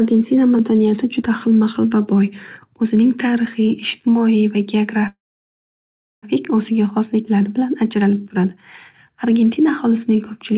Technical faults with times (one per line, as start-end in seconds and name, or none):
5.08-6.25 call audio freeze